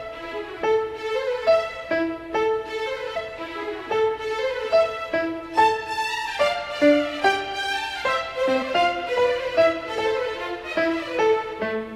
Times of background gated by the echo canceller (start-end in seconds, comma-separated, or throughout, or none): none